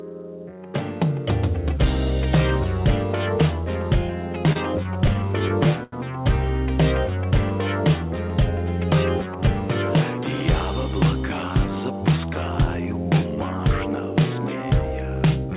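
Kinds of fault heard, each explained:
Repeated stalls (stutter): 4.47 to 5.93 s, late packets kept emptying the jitter buffer, and eleven gaps up to 90 ms were filled with stretched sound, so it drags without loss.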